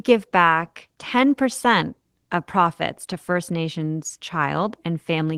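No technical faults can be heard anywhere in the speech, so there is nothing to describe in time order.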